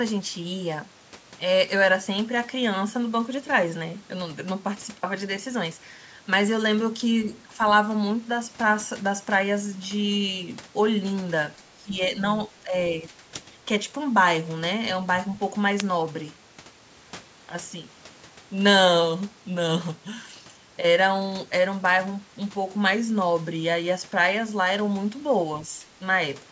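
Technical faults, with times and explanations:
11.58–11.96 s, 12.49–12.73 s and 13.02–13.13 s, speech suppressed in double talk: the speech dips in three bursts, deepest at first (about 15 dB) and shallower after, most likely an echo canceller ducking the talker while the far end spoke. The waveform shows notched envelope gaps, and the spectrogram shows energy fading.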